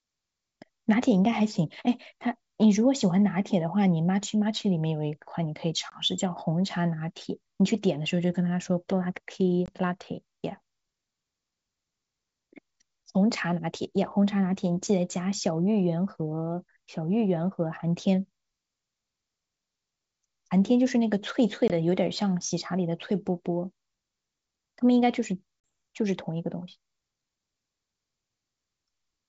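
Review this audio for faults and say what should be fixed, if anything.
Packet loss on the ADPCM call shows up as four hard-edged dropouts, at 5.90–6.02, 9.66–9.70, 21.68–21.73 and 25.61–25.63 s. The first three each lose about 20 ms, roughly one packet, and the last loses about 40 ms, a couple of packets. After each hole the decoder's predictor and step size have drifted from the sender's, so the speech comes back slightly distorted for a few tens of milliseconds while the two resynchronise. The wideband coding stays clear up to around 7 kHz, consistent with G.722 at its full 64 kbit/s rate. To prevent it, add a jitter buffer with packet-loss concealment that resets or re-aligns the ADPCM decoder state after a gap, or carry the call over a cleaner network path.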